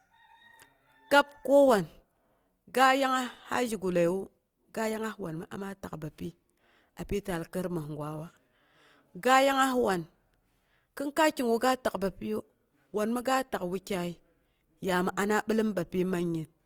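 Throughout, the speech sounds grainy and rough, likely from Opus compression at a low rate near 24 kbps filling starved bands with noise, though the top reaches 20.2 kHz.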